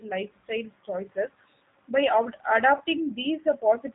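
The whole recording passed through the G.729 codec, which rebuilds speech from a vocal tract filter, a pitch predictor and a few pulses per frame, at a rate that points to 8 kbit/s. The speech is plainly rough and synthetic, with nothing above 4 kHz.

From 2.78 to 2.83 s, VoIP packet loss concealed by the speech codec interrupts it. The decoder filled a gap that fits two lost 10 ms frames by extrapolating from its last pitch and filter, so the sound smears into a brief, fading, weakened stretch before recovering.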